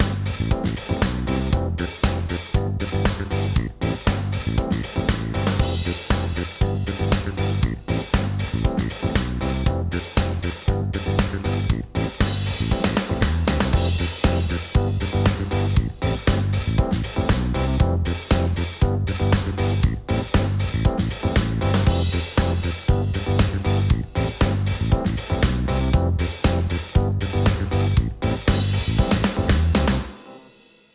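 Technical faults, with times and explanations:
No technical faults can be heard anywhere in the signal.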